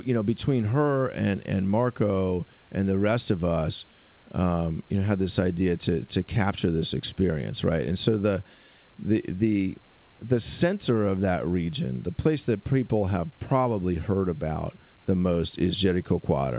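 No technical faults are audible.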